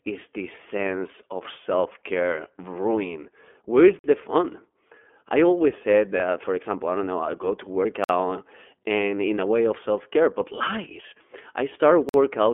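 Speech runs through the whole thing, and it's been squeezed through the iLBC codec. The band sits at about 250 Hz to 3.4 kHz, so everything above telephone range is gone and the low end is thin. The coding damage is plainly audible as a rough, slightly synthetic edge on the voice, which fits the 30 ms frame, 13.33 kbps mode of iLBC, where each frame's excitation is coded on its own. On top of that there's a gap between chunks three times: 3.99 to 4.04 s just before "the fun", 8.04 to 8.09 s right after "know I go to", and 12.09 to 12.14 s. Each is a 50 ms hole, landing every 4 s. That points to the audio being handled in 4-second chunks with a bit of dead air left at each join. No sound is actually lost, it just gets chopped at the seams. Separately, there are lost iLBC frames at 6.16 to 6.21 s, between "I always said" and "for example I don't". It sounds like a single 30 ms frame went missing, and the decoder filled it by repeating the last pitch cycle with some noise mixed in. 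So you get a brief held, slightly buzzy smear, and the voice snaps back almost immediately because the next frame doesn't depend on the lost one.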